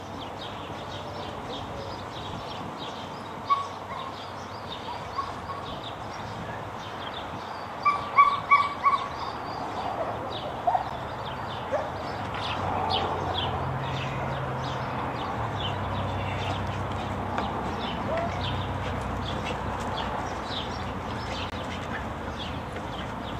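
At 5.71 s the sound lurches forward with a brief smeared blip instead of a click, losing roughly 150 ms of material. These are compressed frames skipped: whole frames were missing or rejected by the decoder, so playback jumped ahead. Because adjacent frames overlap, the join blurs rather than snaps. The jump here fits about five frames of 26.1 ms each.

At 10.9 s a sharp tick cuts in. This is a block of digital silence lasting 10.67 ms, where the output dropped to zeros and came back with no fade. The length fits a 512-sample buffer that was not filled in time.

At 12.55 s the sound skips again with the same soft smear, missing roughly 70 ms. This is another case of compressed frames skipped, which fits about three frames.

At 18.9 s a third smeared skip loses roughly 50 ms, which fits about two frames.

From 21.50 to 21.52 s a longer hole of 21.33 ms is heard. This is another block of digital silence, and its length fits a 1024-sample buffer.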